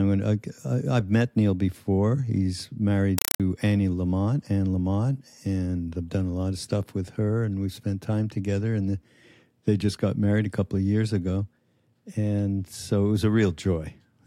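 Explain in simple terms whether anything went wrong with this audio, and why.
From 3.18 to 3.40 s, a compressed stream played as audio: encoded Dolby Digital data reached the output without being decoded and was treated as ordinary sound. Each packet of data became a 4 ms burst of noise, repeating 31 times a second, heard as loud chattering static.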